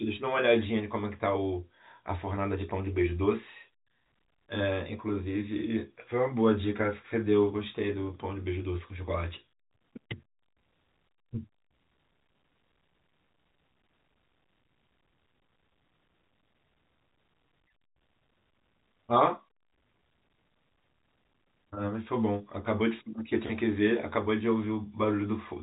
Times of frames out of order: none

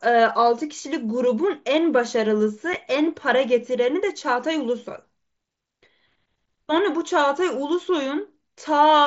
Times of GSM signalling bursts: none

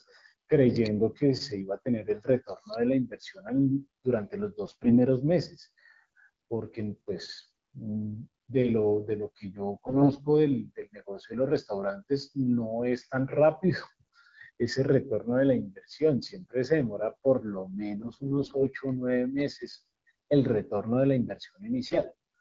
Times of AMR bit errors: 4.66-4.94, 7.32-7.49, 9.86-10.18, 18.00-18.64, 19.71-19.84, 21.85-22.05

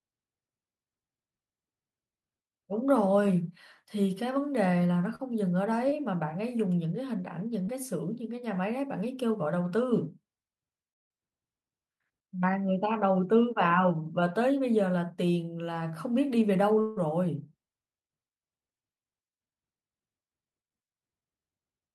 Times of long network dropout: 10.93-11.11, 16.81-17.08

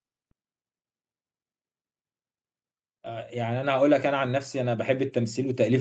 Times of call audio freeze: none

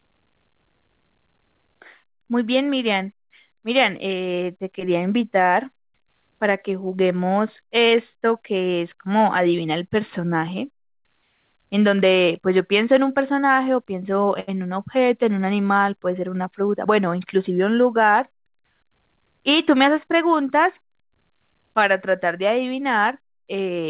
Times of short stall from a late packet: 14.40-14.49

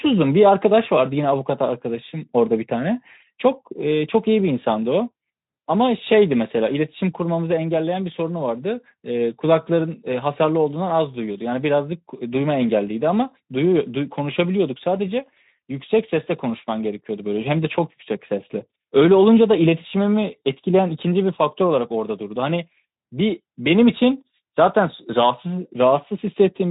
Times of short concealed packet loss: none

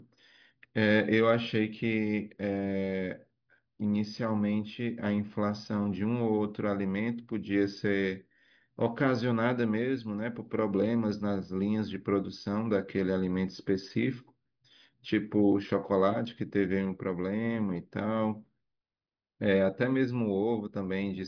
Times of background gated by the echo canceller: none

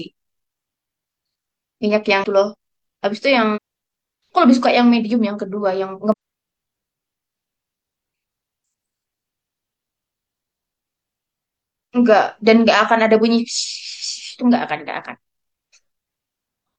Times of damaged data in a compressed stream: 2.20-2.24, 3.52-3.58, 6.12

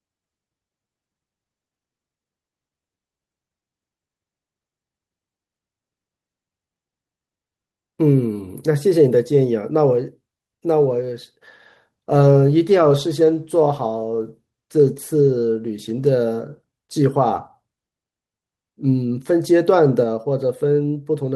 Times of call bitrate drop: 10.98-16.19

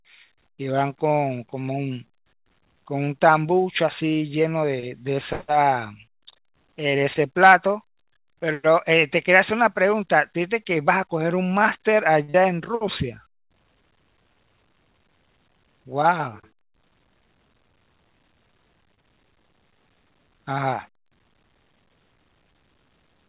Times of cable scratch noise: none

